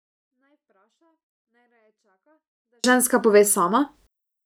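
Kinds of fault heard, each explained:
24-bit alignment error (too quiet): speech sits about 48 dB down yet undistorted until 2.84 s, before "ženska pove", because 24-bit samples in 32-bit words were read as full 32-bit values.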